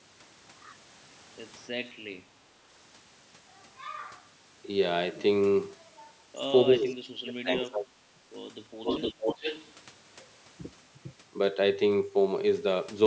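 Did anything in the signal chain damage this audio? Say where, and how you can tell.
Yes, and it's in the call processing. From 6.68 to 8.19 s the speech sinks hard, down by roughly 30 dB at the deepest point, with another short dip of about 10 dB from 9.22 to 9.27 s. That's speech suppressed in double talk. Both ends were likely talking at once, and the echo canceller ducked everything because it couldn't separate the talker from loudspeaker echo.

There's also an echo leak from 8.83 to 9.72 s. A copy of the speech comes back 459 ms late, sitting only a few dB under the direct signal. One side is likely on a speakerphone, and its canceller didn't fully remove what its microphone picked up.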